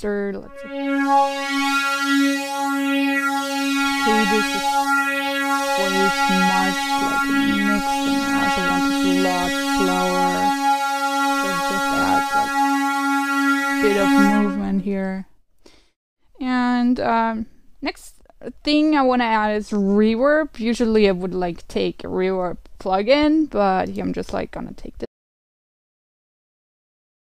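At 25.06 s the audio drops out to silence and stays silent until the end, about 2.2 s later. The sound cuts off mid-flow with no room tone left in the gap, most likely because the input was lost while recording continued, writing silence.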